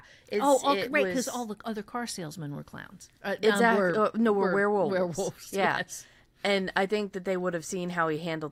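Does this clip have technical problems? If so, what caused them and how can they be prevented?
No technical faults are audible.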